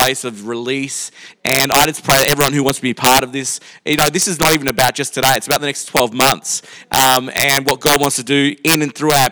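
Integer overflow runs through the whole clip. The signal was pushed about 9 dB past full scale. The arithmetic did not hold the peaks at the limit. Instead they wrapped around to the opposite extreme. Only a small share of samples crossed the line, roughly one in a hundred. Each crossing throws the waveform from top to bottom in a single step. The result is a series of harsh, violent cracks on the loudest moments. They are far sharper than ordinary clipping.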